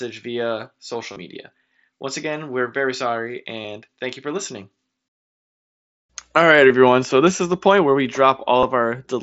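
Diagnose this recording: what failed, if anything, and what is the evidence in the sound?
The network stage failed: concealed Bluetooth headset packet loss at 1.13–1.16 s, 2.31 s (just before "we're very sorry"), 3.62–3.64 s, 6.69 s and 8.60–8.63 s (after "the point where we"). Lost mSBC frames were patched by repeating recent waveform. The patches show as copied harmonic stripes on a spectrogram and repeated periodic cycles on the waveform, brief buzzes held at level where several frames were lost in a row.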